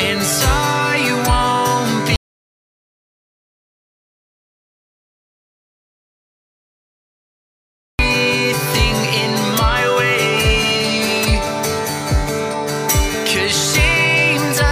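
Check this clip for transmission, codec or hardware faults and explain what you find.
One fault stands out: an audio dropout to silence from 2.16 s to 7.99 s, about 5.83 s of lost material. The sound cuts off abruptly mid-flow and returns just as suddenly, and the gap holds silence with no room tone or hiss. The likely cause is a lost input, such as a disconnected device or failed link, while the recorder kept writing silence. On a waveform it's a dead-flat line; a spectrogram shows a blank band.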